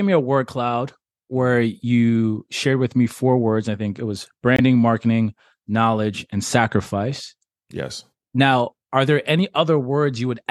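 At 4.56 to 4.60 s the speech cuts to silence for a few tens of milliseconds, likely a Bluetooth dropout. A packet seems to have missed its deadline to the headphones, which fits a single lost frame of about 21 ms. Playback then resumes further along, as though the audio had kept running.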